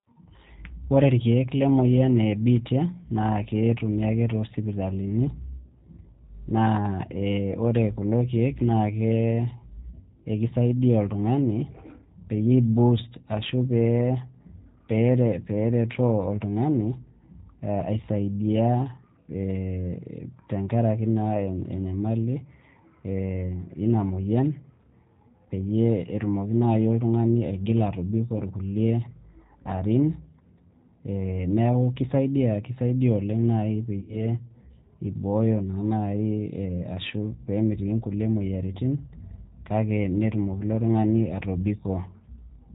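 Throughout the speech, the G.729 codec damage is plainly audible. The sound is rebuilt from a vocal tract filter, a pitch predictor and a sparse set of pulses per 10 ms frame, so it comes across rough and faintly synthetic. Nothing is present above 4 kHz, and the character fits the 8 kbit/s G.729A mode.

VoIP packet loss concealed by the speech codec appears three times. At 17.80 to 17.84 s and 28.38 to 28.42 s the gaps are short, consistent with one and two lost 10 ms frames. The decoder extrapolates from its previous pitch and filter state, producing a brief buzzy tone or coloured noise. At 34.00 to 34.26 s the gap points to about 80 ms of lost audio. The extrapolated sound is stretched and fades as its gain is reduced frame by frame, and the speech stays weak and distorted until the decoder state recovers.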